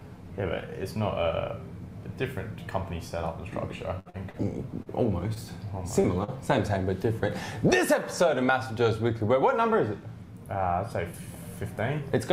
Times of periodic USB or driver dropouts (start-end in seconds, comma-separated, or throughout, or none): none